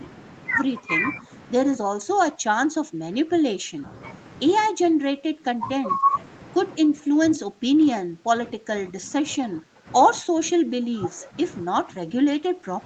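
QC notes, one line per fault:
0.8–1.3 s, 1.8–3.86 s, 4.7–6.14 s, 6.79–9.87 s, 10.19 s to the end: speech suppressed in double talk, likely from the echo canceller mistaking near-end speech for loudspeaker echo during overlap and attenuating it. The speech dips by about 5 dB at first, then by about 15 to 20 dB, thinning and breaking up in patches.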